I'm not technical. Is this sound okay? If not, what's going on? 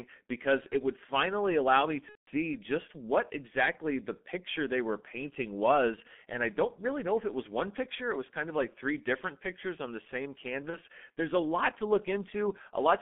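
No. The whole recording sounds muffled and a little hoarse, as if heard over an old phone line, and sharp sounds like "s" and "t" come out smeared. This is the G.723.1 codec, an early internet-phone format that squeezes speech very hard. It keeps only the middle range of the voice, roughly 200 Hz to 3.5 kHz, so the crisp upper detail is gone. It also rebuilds the voice in coarse 30 ms steps, which blurs the quick consonants.

Twice the voice briefly turns into a buzzy tone or a coloured noise that fades instead of carrying on normally. The first time runs from about 2.09 to 2.30 s, right after "would finally allow me" and before "just what exactly the". The second is a short blip at about 10.70 to 10.77 s, just after "pictures on the same". This is VoIP packet loss concealed by the speech codec. Pieces of the call went missing in transit, about 180 ms the first time and 30 ms the second. 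The decoder filled each gap by stretching the last bit of voice it had while fading it out, which produces the fading, dying sound.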